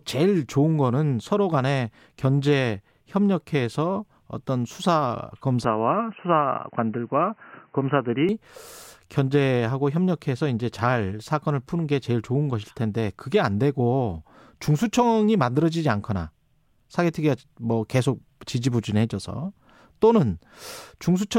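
At 5.64 s the speech abruptly loses everything above 3 kHz and turns dull and boxy, with a faint new background noise sitting well below the voice. The change comes with no gap in the audio and no obvious jump in level. At 8.29 s the full bandwidth returns just as suddenly. This is most likely the input switched to a poorer device, such as a narrowband headset call profile, for about 2.6 s before switching back.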